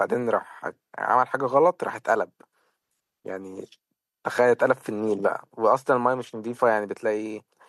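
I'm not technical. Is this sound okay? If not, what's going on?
Yes, nothing stood out as a problem on listening to this recording.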